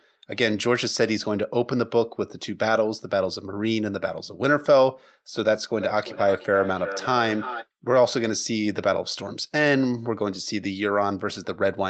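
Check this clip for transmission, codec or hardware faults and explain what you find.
One fault is present, a feedback echo between two devices, from 5.79 to 7.67 s. Two devices in the same room were on the call, so one loudspeaker's output reached the other microphone and circulated, which that device's echo canceller cannot remove. The speech returns roughly every 400 ms, thinner and ringing, peaking about 10 dB below the direct speech. The call's microphone processing, with its normal bass cut and nothing above 8 kHz, is not a fault.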